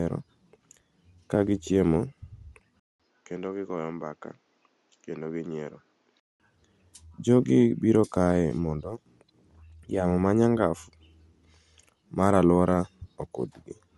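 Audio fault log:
Throughout, Bluetooth LC3 compression: the speech carries a plainly audible breathy, grainy edge, with nothing above 11.5 kHz. This is likely LC3 coding in 10 ms frames at a low rate, perhaps 48 kbps. A spectrogram shows a hard ceiling and speckled, noise-filled upper bands.
2.8 to 6.4 s, input switched to a poorer device: after a 200 ms gap the speech turns dull and boxy, about 10 dB quieter, cut off above 7.6 kHz, with a noise floor around 40 dB down. This is likely a change to another microphone. The waveform shows a dropout, then a smaller envelope.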